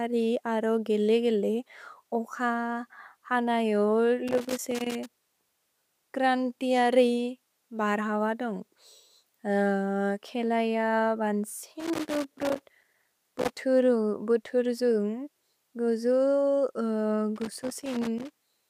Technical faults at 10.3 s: none

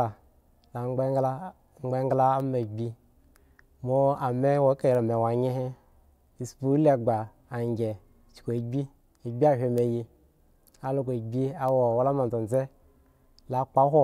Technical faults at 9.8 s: bit error spike

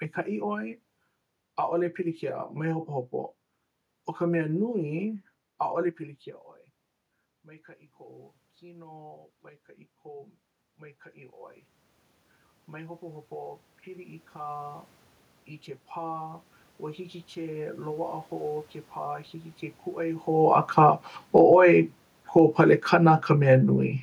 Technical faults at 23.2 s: automatic gain falling

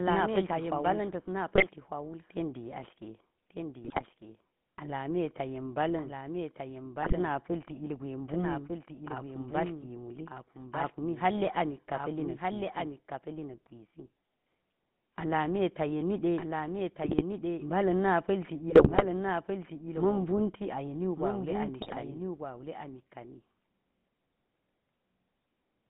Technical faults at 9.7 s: doubled audio track; GSM full-rate codec

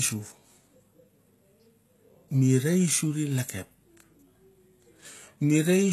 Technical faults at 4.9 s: HE-AAC compression

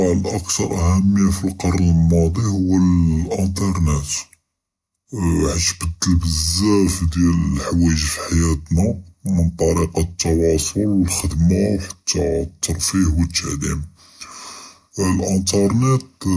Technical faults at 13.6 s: wrong sample rate

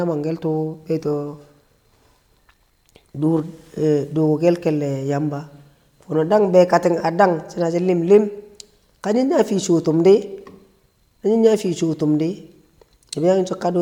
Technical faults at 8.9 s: none

